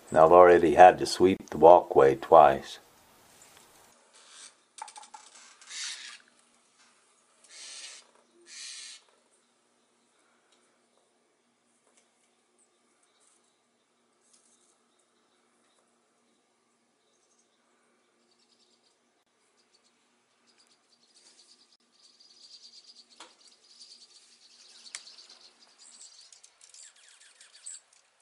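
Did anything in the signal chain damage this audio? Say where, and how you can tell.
Yes. At the codec stage there are gaps at joins of encoded pieces: 1.37 to 1.40 s (32 ms) and 21.76 to 21.80 s (42 ms). Separately encoded sections were joined untrimmed, so encoder delay and last-frame padding open short, smeared silences in continuous sound.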